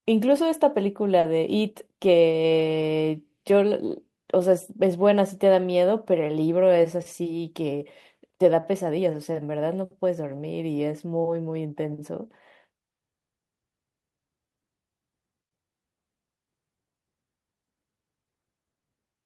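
Speech, with a short concealed packet loss from 1.19 to 1.25 s: about 40 ms never arrived and was filled by extending the preceding sound, leaving a brief smear where real detail is missing. Separately, lost packets rebuilt from error correction appear at 1.23–1.25, 2.03–2.05, 2.21–2.23, 2.31–2.33, 2.59–2.61 and 2.81–2.83 s, each 20 ms. Unlike concealment, nothing is missing there; those frames just sound rougher and noisier, played from a low-bitrate backup copy.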